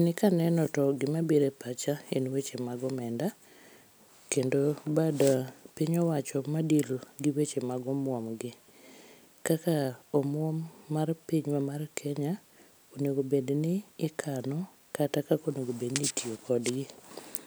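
At 0.66 s, just before "to gima biro", a Bluetooth stutter: a 14.5 ms gap, fitting one lost packet, is filled by replaying the previous buffer, heard as a brief flicker.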